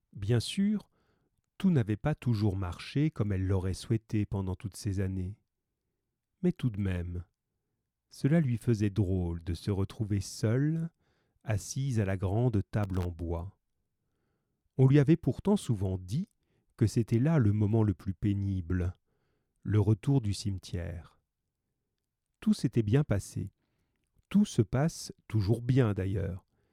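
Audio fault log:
12.83–13.05 s, processor overload crackle: after "assise à la grande", missed buffer deadlines cut many tiny silent gaps, seen as hard-edged waveform dropouts and vertical broadband spectrogram streaks.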